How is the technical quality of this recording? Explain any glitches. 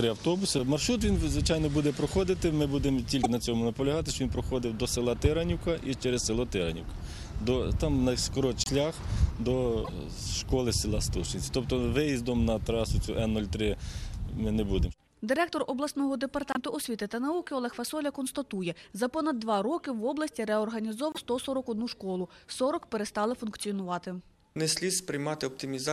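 The recording has five brief glitches, at 3.23–3.26, 8.64–8.69, 9.84–9.89, 16.52–16.57 and 21.12–21.18 s. Each lasts 30 to 60 ms, one or two 26.1 ms MP3 frames, and the sound skips ahead while a short chirp, noise burst or gap fills the spot. The likely cause is a broken MP3 bit reservoir: after a cut, the next frame reaches back for data and decodes another frame's bytes. Unlike a plain dropout, the content jumps forward and the damage has a coded, garbled texture.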